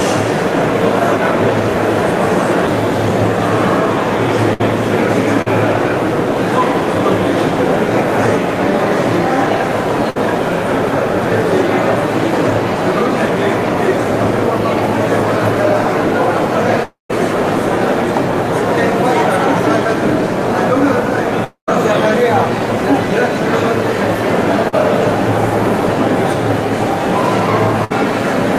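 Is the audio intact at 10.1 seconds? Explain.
No, a burst of packet loss hits at 10.10 to 10.17 s. The receiver stretches the last sound into a fading tail, then resumes about 60 ms further on.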